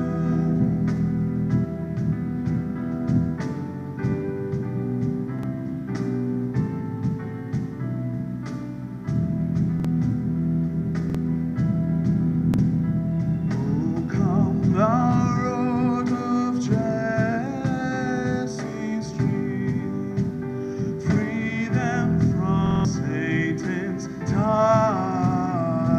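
At 5.39, 9.80, 11.10 and 12.54 s a repeated buffer occurs. Fresh audio arrived late, so the device replayed its last block once, giving a 46 ms stutter with a hard join and losing about 50 ms of sound each time. At 22.66 s the block plays four extra times, a 0.19 s stutter that loses about 200 ms. The 46 ms length fits a 2048-sample buffer. Unlike a dropout, there is no silence: the same piece of sound repeats.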